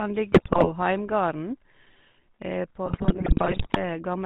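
Speech coded through the GSM full-rate codec: the whole clip is band-limited to 4 kHz and carries the buzzy, gravelly roughness of a vocal-tract model driven by sparse, regularly spaced pulses, which fits the 13 kbps full-rate scheme and leaves the codec damage plainly audible. GSM bit errors break the sound into squawks, pops and gargling from 0.32 to 0.70 s and again from 2.86 to 3.77 s. Corrupted filter, pitch and gain values bend the spectrum and swing the level frame by frame, which points to a weak radio link letting flipped bits reach the decoder.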